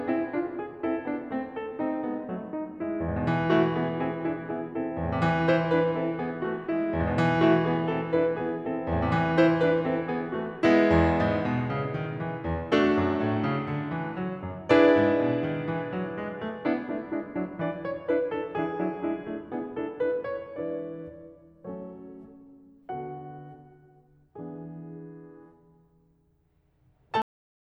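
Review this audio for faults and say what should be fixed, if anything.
The music has a cut-off end at 27.22 s. The sound stops abruptly in the middle of a passage. It falls straight to digital silence with no natural decay, and that silence runs for the final 0.39 s. Nothing fades or rings out. The last stretch of audio was never written to the file or played out. The closing buffers were most likely dropped when recording or export stopped too soon. To fix it, flush and write all pending buffers before closing the stream or file.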